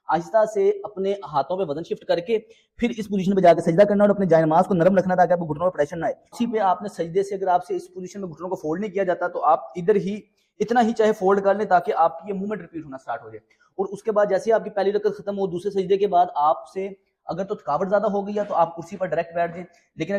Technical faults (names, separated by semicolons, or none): none